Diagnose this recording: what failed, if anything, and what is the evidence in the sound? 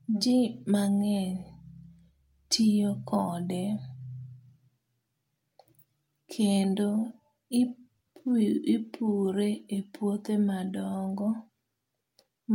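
Nothing failed; no stage shows a fault in this recording.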